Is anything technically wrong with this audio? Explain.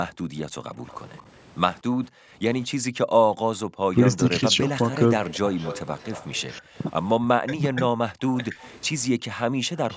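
Yes, there are echo-canceller problems in this speech recording.

Background gated by the echo canceller, 0.15–0.34 s, 2.09–3.75 s and 8.11–9.65 s: while the far end's loudspeaker played, the canceller clamped the microphone by about 40 dB. The room tone drops out in brief holes, a fraction of a second each time, then returns.

Echo leak, 0.87–1.21 s, 4.52–6.79 s and 8.61 s to the end: a faint copy of the voice trails 226 ms behind, likely residual loudspeaker pickup the canceller failed to remove. It is very quiet in the first stretch, louder around 5–6 s, and between those levels at the end.

Speech suppressed in double talk, 3.94–4.59 s and 6.6–8.56 s: with both sides talking at once, the canceller likely mistook the local talker for echo and attenuated it. The voice dips only slightly in the first span but sinks sharply, by roughly 25 dB, in brief moments during the second.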